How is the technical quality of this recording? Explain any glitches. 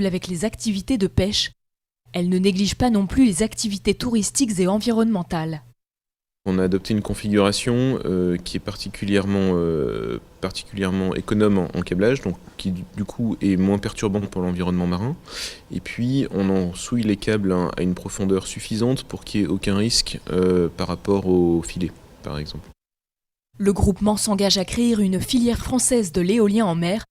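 Two short glitches, both frames out of order, at 14.18–14.28 s and 25.54–25.65 s. Two neighbouring 40 ms blocks play swapped, giving a brief garbled flutter.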